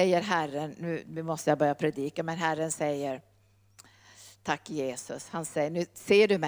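A speech recording carries crude rate conversion from start to finish: a faint gritty fizz rides on the louder and brighter syllables, roughly 30 dB below the speech. The pattern fits linear interpolation from 32 kHz to 44.1 kHz without a proper anti-imaging filter, leaving mirrored images of the speech spectrum. On a spectrogram these show as faint, inharmonic copies above 16 kHz tracking the voiced energy. The waveform itself looks almost unchanged.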